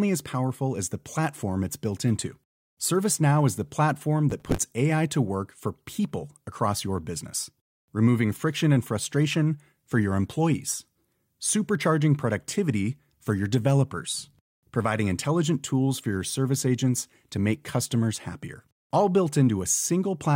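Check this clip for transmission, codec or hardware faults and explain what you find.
One fault appears. From 4.30 to 4.71 s, just after "is the platform", processor overload crackle: around twenty missed buffers of roughly 5 ms each replay stale audio, giving gritty tearing rather than one clean dropout.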